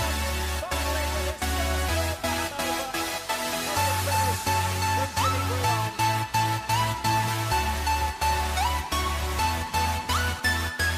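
Nothing is technically wrong with the clip, so there are no times or causes to give.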